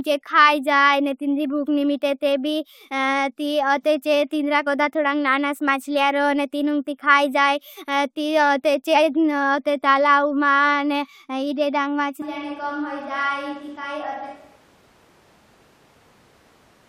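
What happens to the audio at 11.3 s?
Nothing goes wrong at 11.3 s; the speech carries on intact through that moment, with no audible dropout, glitch or distortion.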